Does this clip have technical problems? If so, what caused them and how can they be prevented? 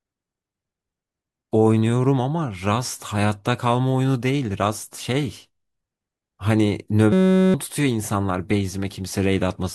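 Yes. From 7.13 to 7.54 s the speech gives way to a steady buzz pitched at about 188 Hz, as one 5.33 ms scrap of audio repeats 78 times, which fits a 256-sample buffer. This is a system hang loop: the computer or audio driver stalled while the sound hardware kept replaying the same small ring buffer, so about 0.4 s of the real speech never reached the output. To prevent it, fix the driver or system stall, for example by updating drivers and keeping the audio process from being starved of CPU time.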